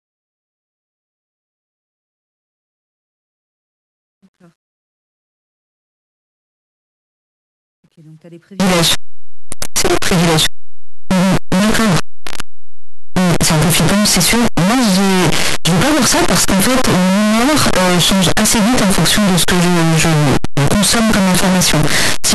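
From 8.60 s to the end, the speech collapses into a wall of harsh, very loud distortion, with soft sounds as loud as the strong ones around them. The likely cause is signed and unsigned mixed up on the 8-bit samples, so the top bit flips and every zero crossing jumps across the whole range. The waveform becomes a solid block swinging across its whole range, and the spectrogram fills with broadband energy right up the frequency axis.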